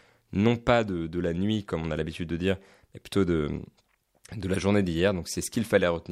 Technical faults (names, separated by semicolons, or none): none